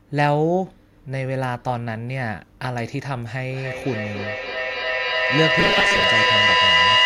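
It's a speech recording, and from 3.49 s to the end there's a feedback echo between two devices. Each word comes back roughly every 300 ms, thinner and more ringy each pass. Because two devices sharing a room are on the same call, one plays out what the other's mic sent, that mic hears it again, and neither echo canceller touches sound from the other device. The loop is hot enough that the repeats build up instead of fading, peaking at about 5 dB above the speech itself. Between 5.59 and 6.04 s there's also robotic sound from repeated short buffers: a stiff, metallic buzz at 200 Hz that still loosely tracks the speech. That's likely the playback side running short of fresh audio and looping the last chunk, which fits a buffer of about 5 ms, with roughly half the audio in that stretch being repeats rather than real signal.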